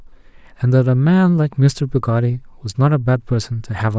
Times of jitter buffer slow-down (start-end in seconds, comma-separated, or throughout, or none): none